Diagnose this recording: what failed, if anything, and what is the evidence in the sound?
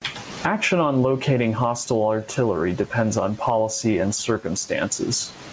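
Mic input gain, likely far too high into a fast limiter, causes gain pumping throughout: the gain swings around 20 dB under loud speech.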